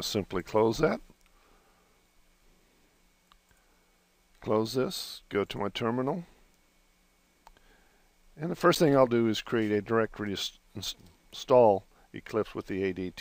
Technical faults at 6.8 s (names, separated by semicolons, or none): none